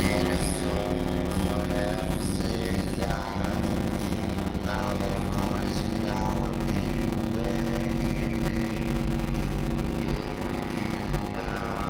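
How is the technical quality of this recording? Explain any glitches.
The recording is marred by one fault, a block size mismatch with zero padding, present for the whole clip. One stage writes shorter blocks than the next stage reads, and the shortfall in each block is filled with silence, which fits 256-sample writes. The sound carries a steady 100 Hz buzz and plays at 0.533 times normal speed, at roughly its usual pitch.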